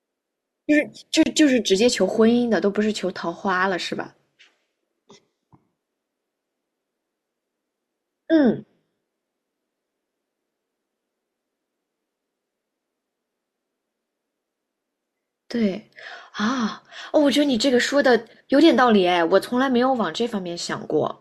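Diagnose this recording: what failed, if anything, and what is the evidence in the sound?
The failure is at the codec stage: a gap at a join of encoded pieces. From 1.23 to 1.26 s the speech drops into a gap of about 28.5 ms, with edges smeared by the codec, and then resumes exactly where it broke off. That points to two separately encoded segments butted together untrimmed, so the second segment's encoder start-up delay and the first segment's padded final frame both remain as dead air.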